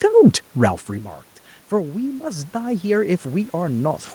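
From about 1.7 s to 4.1 s you can hear automatic gain rising: the input level had dropped by about 12 dB, so the gain control slowly pushed up by about 7 dB. The speech and the room noise swell together over those couple of seconds.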